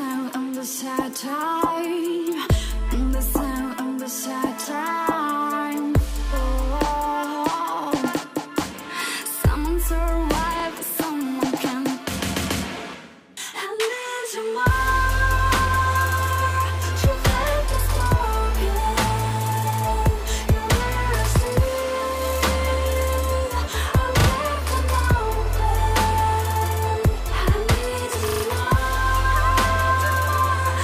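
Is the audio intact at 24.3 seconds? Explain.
No. A repeated buffer runs from 24.2 to 24.28 s: new audio arrived late, so a 40 ms piece played three times with hard joins, heard as a brief stutter.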